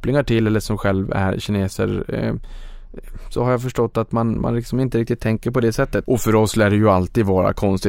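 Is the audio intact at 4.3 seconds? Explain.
Yes, the speech at 4.3 seconds is intact, with no audible fault at that moment.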